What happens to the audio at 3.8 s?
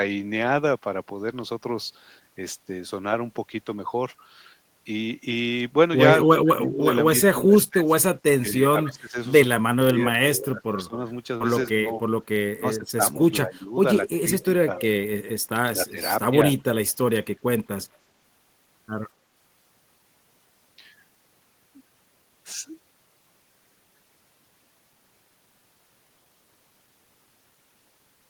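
Nothing goes wrong at 3.8 s; the speech there plays through intact, with no dropout, click, distortion or other fault.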